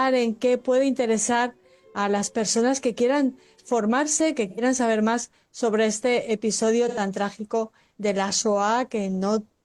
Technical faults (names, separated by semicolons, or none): AAC frame loss with concealment